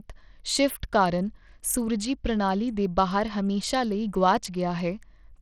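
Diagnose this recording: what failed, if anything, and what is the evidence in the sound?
Across the whole recording the speech has a gritty, grainy edge, with the upper treble thinning out and flickering in and out rather than holding steady, plus a metallic aliasing riding on the sound. The stage is the codec, likely Bluetooth SBC compression at a starved bit pool, which fits roughly 80 kbps: the crude sub-band allocation gives the weak top bands almost no bits and quantises the rest coarsely, leaving plainly audible damage.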